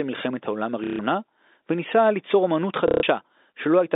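Packets dropped twice in this speech recording, from 0.84 to 0.99 s and from 2.88 to 3.03 s, and the receiver kept replaying the last one it had, so each 150 ms gap becomes a buzzy robotic stutter, consistent with packet loss with last packet repeated of roughly 30 ms packets, heard over narrowband telephone-style G.711 audio.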